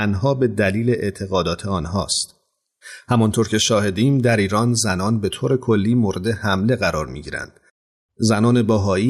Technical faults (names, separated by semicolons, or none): none